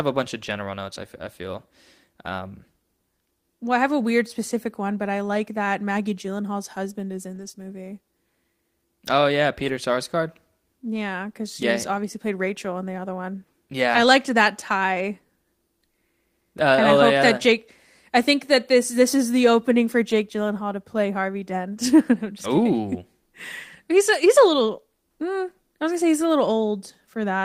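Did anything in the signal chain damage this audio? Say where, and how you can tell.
Yes. The damage comes from the network, with the codec's recovery shaping what is heard. There are lost packets rebuilt from error correction at 7.35 to 7.49 s, 9.60 to 9.70 s and 20.12 to 20.14 s. The sound does not drop out in these spans. Instead it turns rougher and noisier. That fits Opus in-band forward error correction. Each lost packet was replaced by a low-bitrate copy carried in the next packet. The lengths, 80, 60 and 20 ms, point to four, three and one 20 ms packets.

A short concealed packet loss follows at 7.51 to 7.56 s, just after the first rebuilt stretch. About 20 ms of audio never reached the decoder in time, and no backup copy was available. The receiver filled about 23 ms by extending the preceding sound, from its pitch if voiced or as shaped noise if not. It then blended back into the real signal. 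This is heard as a brief smear or wobble.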